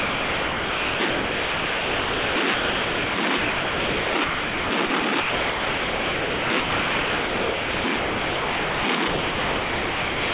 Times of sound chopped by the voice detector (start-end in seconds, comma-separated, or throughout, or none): 0.00-10.34